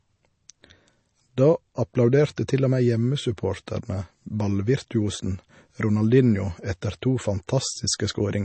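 Throughout the speech, the treble stops dead at 8.3 kHz and the sound has a watery, swirling quality, likely from MP3 compression at a low bitrate, around 32 kbps. On a spectrogram this appears as a flat ceiling with speckled holes where weak bands drop out frame to frame.

At 3.66 s there is pre-echo: a short hiss of about 11 ms just before a sharp attack, because the codec's quantisation noise has spread backward across the block. The waveform shows a thin noise smear ahead of the onset, and the spectrogram shows a broadband haze there.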